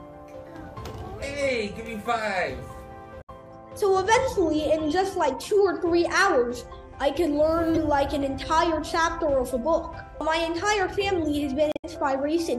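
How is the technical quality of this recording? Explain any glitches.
The recording has three short glitches, all from damaged data in a compressed stream: at 3.18–3.30 s, 7.75–7.78 s and 11.72–11.85 s. In each spot the compressed data got corrupted, so the decoder misread those frames, lost sync and had to hunt for the next valid frame header. You hear that as a quick glitch lasting roughly a tenth of a second, briefer at 7.75 s.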